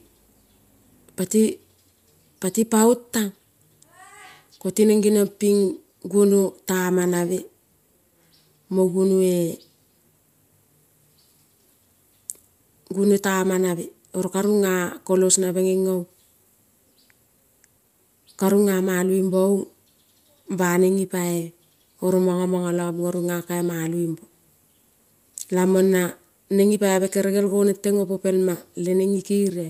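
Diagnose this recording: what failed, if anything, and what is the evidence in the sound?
Nothing failed; no faults heard.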